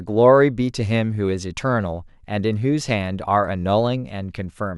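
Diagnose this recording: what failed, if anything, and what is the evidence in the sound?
Nothing in the recording points to a failure at any stage of the chain, from capture through to playback.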